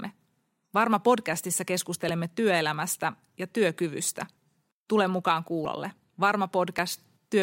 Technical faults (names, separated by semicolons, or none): dropped buffer (overrun)